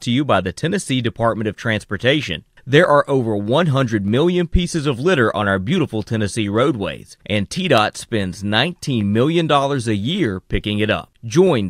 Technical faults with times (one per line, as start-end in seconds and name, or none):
0.38-11.47 clock drift buffer slips